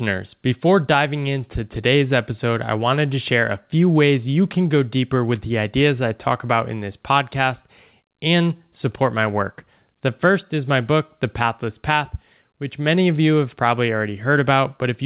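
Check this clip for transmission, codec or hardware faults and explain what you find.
No faults can be heard anywhere in this clip.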